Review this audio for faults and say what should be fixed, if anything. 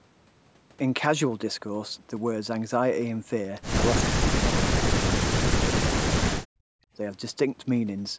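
Speech drops out from 4.13 to 5.37 s and from 5.8 to 6.83 s, sinking around 40 dB for about a second each time. That's likely speech suppressed in double talk: the echo canceller mistook the talker for loudspeaker echo and ducked both. A headset or stronger double-talk detection would prevent it.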